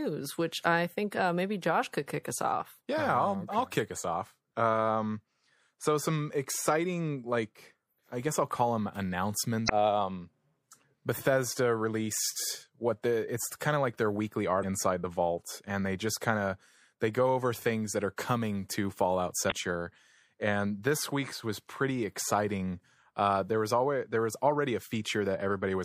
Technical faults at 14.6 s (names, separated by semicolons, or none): MP3 compression; damaged data in a compressed stream